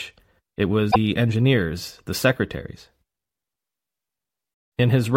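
At 0.88 s, damaged data in a compressed stream produces a brief disruption lasting about 80 ms, ending at 0.96 s, just before "engineers the secretaries". Corrupted bytes there made the decoder misread its frames. It lost sync and had to find the next valid frame header.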